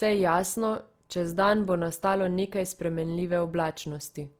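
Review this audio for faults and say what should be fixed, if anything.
Throughout the speech, the voice turns rough and grainy, a noisy fizz replacing clean detail, though content still reaches about 20.4 kHz. This is likely Opus compression in music mode at a low bitrate near 24 kbps, refilling bit-starved bands with folded or noise content. Encoding at a higher bitrate would prevent it.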